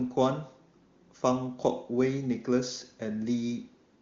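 No technical faults can be heard in this speech.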